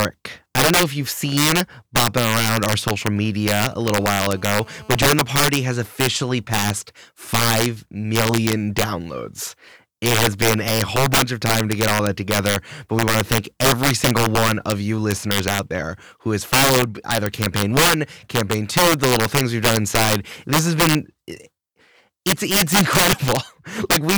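Three faults affect this speech clip. Throughout, a gain stage or sum runs past the largest integer it can hold, an integer overflow: instead of limiting, loud samples wrap to the opposite extreme. With the signal driven about 10 dB too hot, around 2 percent of samples go over, and each one lands as a violent crack on the louder syllables, far harsher and more sudden than ordinary clipping. From 3.02 to 3.74 s, a nearby 2G handset is exchanging short signalling bursts with the network, and the audio circuit rectifies that radio energy into the signal path. The result is GSM signalling bursts, a galloping dit-dit-dit of short buzzes at the 217 Hz burst rate, sitting roughly 30 dB below the speech. From 3.84 to 5.10 s, a nearby 2G phone transmits continuously as in a call, pulsing 217 times a second, and the rectified pulses become GSM phone buzz: a hard, raspy, harmonic-rich drone at 217 Hz, about 29 dB below the speech, steady and entirely unrelated to what is being said.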